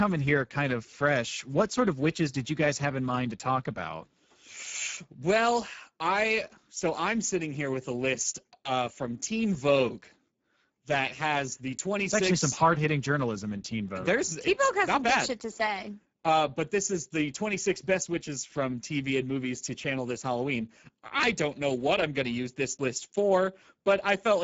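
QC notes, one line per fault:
Throughout, Speex codec: the speech has a plainly audible hoarse, noisy grain because this CELP coder has too few bits to rebuild the excitation cleanly, which fits a low setting of roughly 10 kbps. Nothing comes through above 7.7 kHz.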